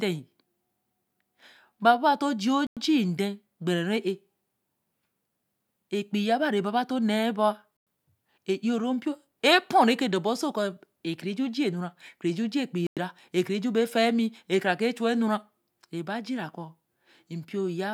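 Gaps between chunks occur at 2.67–2.77, 7.77–7.87 and 12.87–12.97 s: the speech arrives in 5-second blocks, and each join inserts a 100 ms hole of silence. No speech is lost; playback simply stalls briefly at every boundary.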